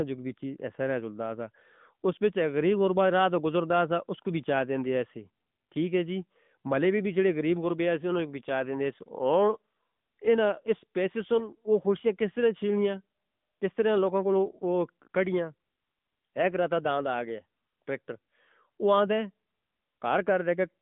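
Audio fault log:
Throughout: AMR narrowband mobile codec, with speech squeezed into roughly 150 Hz to 3.6 kHz and nothing above 3.7 kHz. The buzzy, synthetic edge fits about a 10.2 kbps mode.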